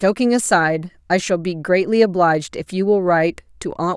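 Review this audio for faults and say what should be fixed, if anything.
No faults found, so nothing needs fixing.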